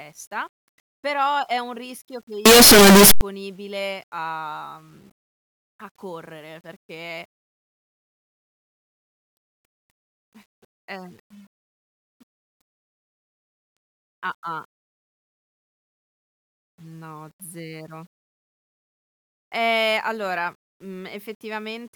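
From 2.46 to 3.21 s, right after "è un rischio che", the speech becomes a harsh, very loud roar, likely signed and unsigned samples mixed up, flipping each value's top bit.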